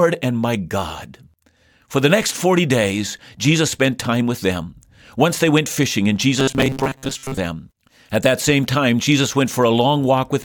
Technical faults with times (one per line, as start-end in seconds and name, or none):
6.40-7.38 robotic sound from repeated short buffers